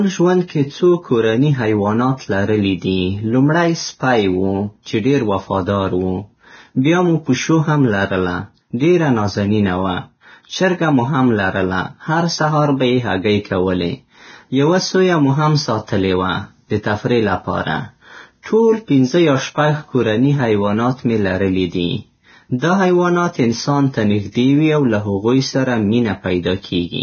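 This speech recording has most likely been through heavy Vorbis compression. The damage fits a very low bitrate, somewhere near 17 kbps, where the encoder drops all content above 6.6 kHz and quantises the remaining treble so coarsely that it turns into hiss, leaving the speech dull, grainy and rough throughout. Twice the codec's block-wide quantisation noise spills ahead of a sharp onset, producing pre-echo: a hiss about 30 ms long runs from 18.43 to 18.46 s and again from 22.59 to 22.62 s. Each attack that follows sounds smeared rather than crisp.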